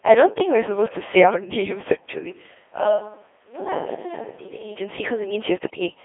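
The whole clip runs through a Codec 2 vocoder. Only pitch, voicing, energy and a spectral envelope survive, and the decoder rebuilds the speech from sine waves, at a heaviness that fits the 2.4 kbit/s mode. The result is robotic and buzzy throughout, confined to roughly 250 Hz to 3.5 kHz.

From 2.31 s to 4.76 s the recording likely falls back to a distant microphone. The speech turns roomy and hollow and loses bass. It drops about 10 dB, and background noise rises toward it. Both the switch and the return are abrupt.

From 5.64 s to 5.80 s, bit errors on the digital voice radio corrupt the vocoder's parameters at a rate of several percent, which fits a handful of damaged frames. The synthetic speech jumps in pitch, level and tone colour and breaks into warbling, bleeping gibberish.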